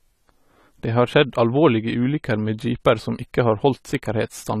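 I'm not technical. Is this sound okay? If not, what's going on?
No. Throughout, the speech sounds dull, with a warbly fizz on s-sounds and nothing above 14.1 kHz. This is likely AAC compression, since plain muffling wouldn't warble.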